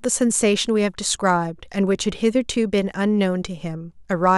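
Speech recording with no technical fault to report. Nothing goes wrong at any point, so there are no times or causes to give.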